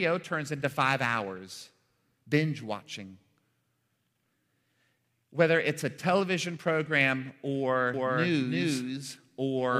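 A doubled audio track appears in this speech recording from 7.94 s and runs to the end: a second, full-band copy of the same speech sits roughly 300 ms behind the original at about the same loudness, switching on abruptly with no decay or room colour. The likely cause is the signal being picked up a second time through a slower path, or an edit that left two out-of-step copies layered together.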